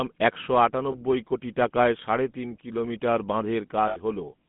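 Throughout, the speech has a buzzy, gravelly roughness and nothing above 3.5 kHz, the sound of the GSM full-rate codec, consistent with a 13 kbps pulse-driven vocal-tract model. Lost GSM frames at 0.92 to 0.96 s and 3.88 to 3.98 s bring a brief rough, metallic ring, as the last good frame is repeated.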